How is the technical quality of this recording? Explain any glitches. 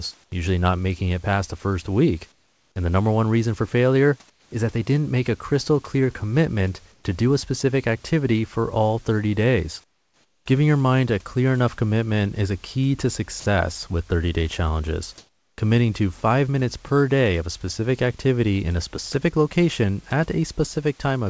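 The recording has two kinds of glitch, both from the call's silence handling. The audio is speech, carried over a WebRTC call path whose band stops at 8 kHz, which fits a wideband codec such as G.722.

Comfort noise in place of the background. The sender's voice detector likely judged the pauses as silence and stopped transmitting, so the receiver generated synthetic noise to fill each gap. This happens at 0.24–0.32 s (just before "usually not making it"), 2.32–2.76 s (after "past the first week"), 4.30–4.52 s, 6.92–7.04 s, 9.84–10.46 s and 15.18–15.58 s (after "day challenges"). The real room background, about 35 to 38 dB below the speech, gives way to a flat, featureless hiss. That hiss is mostly quieter, by about 4 to 12 dB, and is level-matched only in the last gap.

Sound dropped by the voice detector. At 13.40–13.46 s the detector likely mistook the sound for background and cut transmission. 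The receiver played comfort noise in its place, so about 60 ms of sound vanishes into a brief patch of steady noise before the sound resumes once the detector triggers again.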